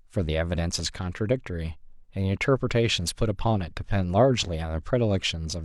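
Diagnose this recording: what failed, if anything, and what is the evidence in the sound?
Overlap between stream segments, at the streaming or playback stage. At 2.70 s the speech skips. About 40 ms vanish where the player trimmed overlapping segment time stamps.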